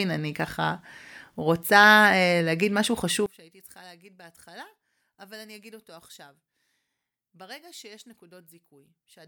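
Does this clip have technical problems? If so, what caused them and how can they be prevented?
Yes. From 3.26 s to the end, the speech collapses by about 27 dB into a faint residue, which points to one channel inverted, likely one stereo channel with reversed polarity being summed to mono, so the matching centre content cancels. On a waveform the amplitude abruptly shrinks to a sliver at 3.26 s; a spectrogram shows energy dropping across all frequencies at once. Checking polarity on every channel and monitoring a mono fold-down before export prevents this.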